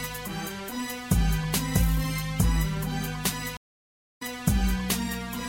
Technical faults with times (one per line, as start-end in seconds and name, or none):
3.57-4.22 stream reconnect